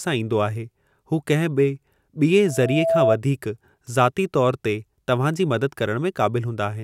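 Speech clip with a loudspeaker feedback squeal from 2.45 to 3.18 s: a single tone at 659 Hz swells up over about half a second and ends up roughly 5 dB above the talker. The mic's catching its own loudspeaker, and at that frequency the loop gain has crept past one.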